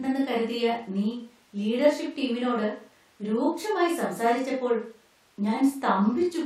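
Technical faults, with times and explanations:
No technical faults detected.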